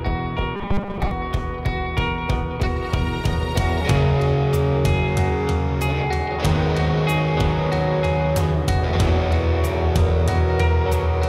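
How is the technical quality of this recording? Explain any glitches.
One glitch stands out, near the start. From 0.55 to 1.11 s the sound turns robotic. It becomes a rigid, metallic buzz pitched at 200 Hz that only loosely tracks the underlying audio. The likely cause is repeated short buffers. New audio arrived too seldom, so the playback looped its last fragment to fill the gaps while real material was skipped. The 200 Hz pitch fits a 5 ms buffer repeating. Roughly 70% of that stretch is repeated fill.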